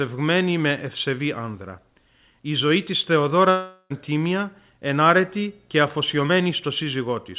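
A speech recording carried over a narrowband call path, with nothing above 4 kHz as a G.711 mu-law link would give. It has two faults. Right after "ζωή της", from 3.5 to 3.92 s, the sound turns into a smeared buzz that fades over about 400 ms, followed by a brief silence of about 30 ms before the speech resumes with that stretch missing. This is likely a long network dropout, with the receiver filling the gap. On a spectrogram the harmonics blur into a decaying haze, and the waveform tapers to a flat line. From 4.85 to 7.17 s, a video or display buzz sits roughly 40 dB below the speech. It is a 60 Hz hum with a harsh hash above it, from a screen or video cable coupling into the audio. A spectrogram shows a steady line at 60 Hz with evenly spaced harmonics stacked over it through that span.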